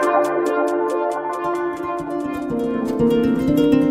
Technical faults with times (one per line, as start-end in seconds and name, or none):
none